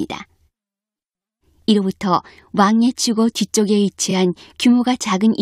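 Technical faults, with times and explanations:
4.10–4.12 s, repeated frames: a 23.2 ms slice of sound plays twice in a row, which points to one compressed frame being decoded again. It makes a brief stutter. Unlike a dropout, nothing goes missing; the clip gains 23.2 ms.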